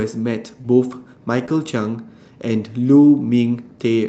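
At 0.61 to 0.65 s there is a short concealed packet loss: about 20 ms of audio never arrived in time, so the decoder extended the preceding sound to fill the hole and then crossfaded back into real audio. It is heard as a brief smear or wobble. A second one follows at 1.45 to 1.49 s. Because nothing of the missing stretch survives, the result is invented continuation rather than a degraded copy, and that distinguishes it from the next fault.

At 0.91 s, 1.35 s, 1.39 s and 1.47 s there is a lost packet rebuilt from error correction. In each case a 20 ms frame was lost, but the following packet carried a low-rate copy of it, and the decoder played that copy. There is no gap or smear, only a momentary roughening and some added noise. The one at 1.47 s overlaps the end of the second concealment.

Throughout, the Opus call path limits the audio to about 8 kHz, at a rate of about 40 kbps.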